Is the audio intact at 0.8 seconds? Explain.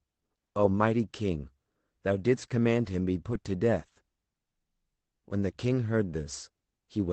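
Yes, the speech at 0.8 seconds is intact, passing through the call path with its 8 kHz band limit and with no dropout, glitch or other fault at that moment.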